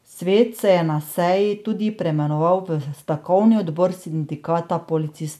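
Speech recording with no technical faults to report.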